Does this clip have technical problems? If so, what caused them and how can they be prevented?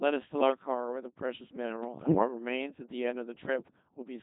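Yes. The whole clip has gone through the Codec 2 vocoder, and the heavy buzzy, robotic quality fits its 2.4 kbit/s mode. Only pitch, voicing, energy and a spectral outline get sent, so the decoder rebuilds the speech from sine waves. Use a higher-rate codec when you need natural speech.

From about 2.0 to 2.28 s there are bit errors on digital voice radio. Corrupted bits, at a rate of a few percent, scramble the parameters of a short run of frames, so the voice warbles and jumps in pitch and tone. A stronger signal or better forward error correction would prevent it.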